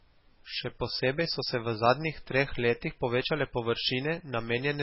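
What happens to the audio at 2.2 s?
At 2.2 s the speech is still carrying damage that runs through the whole clip, most likely from heavy MP3 compression at a very low bitrate, which fits about 16 kbps. Starved of bits, the encoder has cut everything above 5.6 kHz and zeroed weak frequency lines that flicker on and off between frames. The speech sounds dull and muffled, with a watery, swirling texture, metallic chirps on s sounds, and smeared consonant onsets.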